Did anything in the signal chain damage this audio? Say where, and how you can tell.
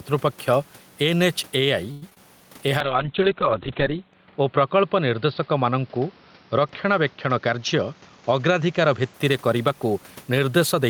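Yes. At the microphone input, the level is set too hot for the source, and a fast limiter or compressor is likely pulling it back on every loud syllable. You can hear gain pumping across the whole clip, with a swing of around 5 dB. Quiet and loud passages sit closer together than they should, so the speech sounds squashed and breathing.

On the network side, packets were held up and the receiver's jitter buffer ran dry, likely causing the call audio freeze from 1.91 to 2.03 s. For about 105 ms the last sound is stretched out as a decaying buzz rather than dropping to silence. When the packets arrive, playback picks up where it stopped, so nothing is lost. The clip is simply pushed 105 ms later from that point on.

Right after that, two bursts of short concealed packet loss follow at 2.10 s and from 2.14 to 2.17 s. There, 10 ms and then about 20 ms of audio never reached the decoder in time. 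The receiver patched each hole by extrapolating the preceding sound and blending back in, which comes across as a quick smear or wobble. It is short enough that a brief consonant could disappear in it.

From 2.81 s to 9.2 s there is a call bitrate drop. The bandwidth estimate fell and the encoder was told to go from 32 kbps down to 9 kbps, with the lowest rate held for about 1.3 s. At that rate the codec quantises far more coarsely and cuts the audio band from 20 kHz down to 4 kHz. The speech turns muffled and watery, losing its sibilance and air until the rate climbs back.

Inside that stretch, from 7.26 to 8.39 s, there is a jitter buffer speed-up. The receiver was holding more audio than it wanted, so it trimmed out pitch-period-sized slices again and again, about 100 ms in total. The speech plays at roughly 109% speed with its pitch unchanged, so this passage sounds noticeably hurried compared with the rest. 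The room noise, sitting about 33 dB under the speech, belongs to the recording itself.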